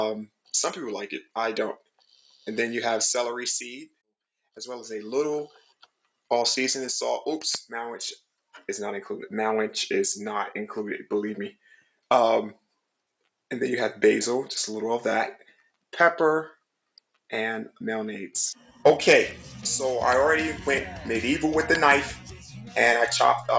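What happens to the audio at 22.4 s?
A noise suppressor built for speech was left running on this audio, treating steady tones, ambience and tails as noise, so the level pumps, flutters or thins with swings of around 5 dB. From 22.37 to 22.76 s, the suppressor takes the sound itself for noise and pulls it down by up to about 8 dB, so it briefly sinks below its surroundings.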